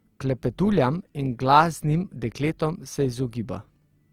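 Throughout, the speech sounds grainy and rough, likely from Opus compression near 24 kbps. The spectrogram shows noisy, filled-in bands up to about 20.2 kHz.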